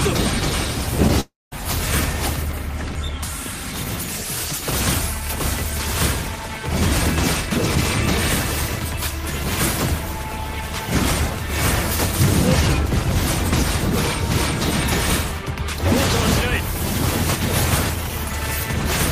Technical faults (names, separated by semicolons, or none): short concealed packet loss; long network dropout; audio missing between chunks